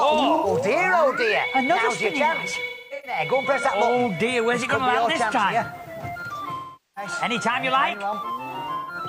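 AAC frame loss with concealment hits at 0.35 to 0.46 s, 2.70 to 3.19 s, 6.54 to 7.12 s and 8.76 to 8.95 s. The decoder rebuilds the missing spectrum from the last good frame, so the short gaps sound smeared, noisy or phasey. The second gap is scattered, with its longest run around 200 ms. The 0.43 s third gap fades toward silence. From 7.94 to 8.13 s, the level drops abruptly by about 6 dB and then recovers, likely from one channel dropping out before the mono sum.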